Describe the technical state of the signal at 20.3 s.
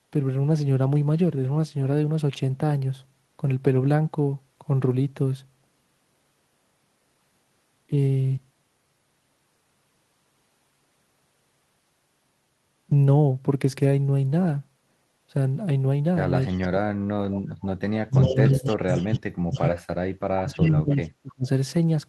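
At 20.3 s the signal is caught in speech suppressed in double talk, running from 20.25 to 21.48 s. The echo canceller was likely unable to tell the near talker apart from loudspeaker echo while both sides spoke at once, so it pulled everything down together. The speech sinks sharply, by about 35 dB at its deepest, with roughly a second of the span affected in total.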